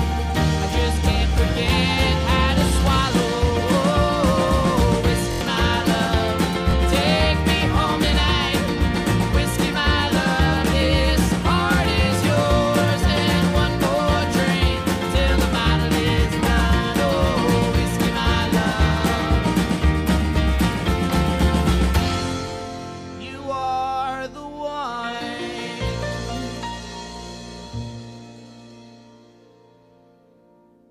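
At 5.32 s and again at 6.71 s, new audio failed to reach the playback device in time, so it replayed the last block it held, a repeated buffer. Each repeated piece lasts about 23 ms, which fits a 1024-sample buffer. From 5.32 to 5.41 s that block sounds four extra times with a hard join at each restart, giving a quick stutter that sounds like a brief buzz, and about a tenth of a second of audio is lost. From 6.71 to 6.73 s it repeats once, a single short click-like hitch that drops only a sliver of sound.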